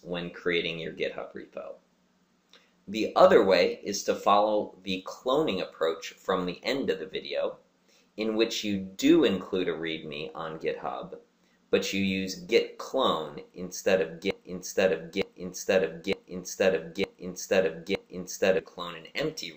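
From 14.31 to 18.59 s there's a broken-record loop: a 0.91 s fragment plays five times back to back, likely from a stalled player resending its last chunk.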